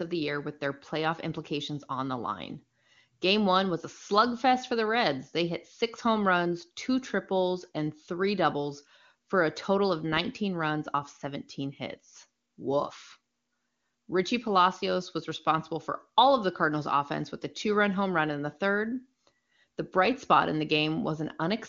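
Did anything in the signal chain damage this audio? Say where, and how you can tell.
No, nothing in the chain audibly damages this speech. It carries the band-limited, wideband character of the AMR-WB (HD Voice) codec at a clear, high-rate quality that fits its top mode of 23.85 kbit/s, with any coding trace faint at most.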